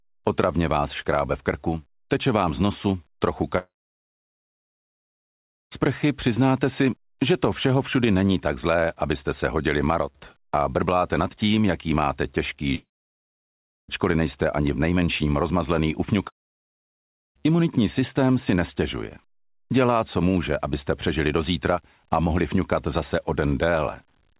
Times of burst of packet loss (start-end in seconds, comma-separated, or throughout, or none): none